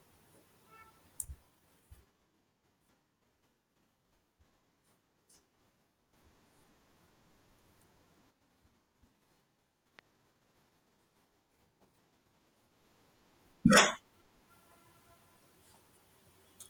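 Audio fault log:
9.99–10.01 s loud pop: a single sharp pop, about 10 dB above the speech, which carries on beneath it. This is likely a brief voltage spike from a plug, switch, static discharge or driver glitch, added to the signal and shaped by later circuitry.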